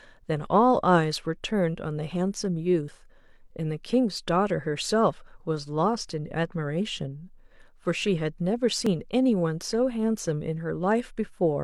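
Overlapping time stamps between stream segments made the player trim speech that was never duplicated, so about 37 ms vanishes at 2.88 to 2.92 s and 40 ms at 8.87 to 8.91 s. Each overlap between stream segments leaves a waveform jump, heard as a click or tiny skip, six seconds apart in step with the segment length.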